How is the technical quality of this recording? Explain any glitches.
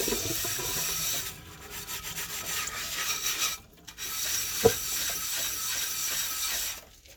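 No glitches or technical faults can be heard anywhere in the recording.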